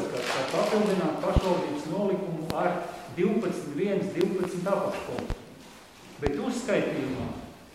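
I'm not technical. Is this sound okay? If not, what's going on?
No. Loud pops hit at 1.37, 2.50, 4.21, 5.19 and 6.27 seconds, doubled at 4.21 and 5.19. Likely electrical glitches. The sound continues underneath.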